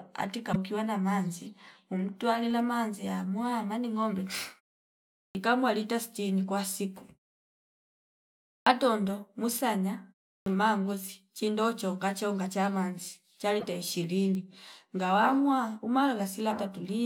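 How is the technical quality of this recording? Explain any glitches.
The recording has two kinds of glitch: brief bursts of corrupted audio from damaged compressed data, and speech onsets clipped after pauses.

Damaged data in a compressed stream, from 0.49 to 0.56 s and from 13.60 to 13.64 s: part of the compressed stream arrived wrong. The decoder could not read those frames, lost sync and had to search for the next valid frame header. Each spot is heard as a short chirp or blip lasting a few tens of milliseconds.

Clipped start after a pause, at 5.31 s, 8.62 s and 10.42 s: during the silences before each of these points, which lasted 0.79 s, 1.52 s and 0.37 s, the output device went idle and needed time to wake and lock again. Each time, roughly 40 ms of the next phrase (37, 42 and 41 ms) was swallowed. The speech therefore starts abruptly out of silence, missing its first sounds.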